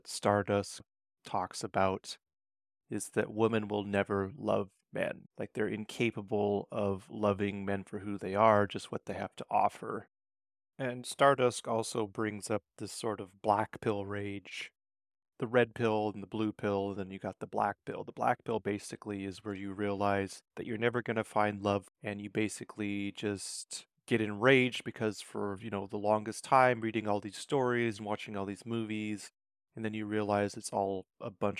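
No technical faults are audible anywhere in the speech recording.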